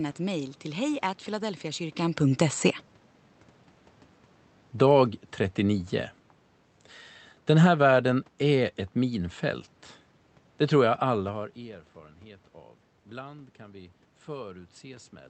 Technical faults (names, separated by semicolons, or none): automatic gain falling; automatic gain rising